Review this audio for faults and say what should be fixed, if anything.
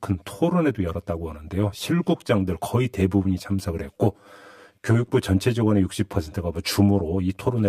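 The whole speech clip has channel delay (comb filtering): one side runs roughly 10 ms behind the other, so the mono fold-down cancels at regular spots, with the first notch around 50 Hz and more about every 100 Hz above. That's why it sounds hollow and phasey. To prevent it, check inter-channel alignment and null-test the mono sum before bouncing.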